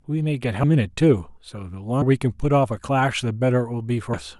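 Compressed frames are skipped at 0.63 s, 2.01 s and 4.13 s. At each point the speech jumps forward, dropping roughly 0.4 s at the first and about 0.15 s at the other two, which fits whole frames of about 26 ms going missing or being rejected by the decoder. Overlapping frames soften each join into a short smeared blip, not a click. A spectrogram shows an abrupt shift in the speech pattern with a faint vertical smudge, and the waveform shows a discontinuous envelope.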